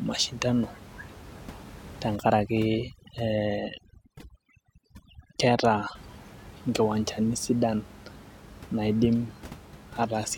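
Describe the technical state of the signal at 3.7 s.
At 3.7 s the signal sits inside a stretch of overdone noise removal running from 2.16 to 5.95 s. The noise reduction stage is working far too hard against the room noise, which lies only about 20 dB below the speech, so it drives individual frequency bands down or off whenever they come close to its noise estimate. Quiet parts of the speech are cut along with the background noise, leaving a lowered background flecked with twinkling artefacts.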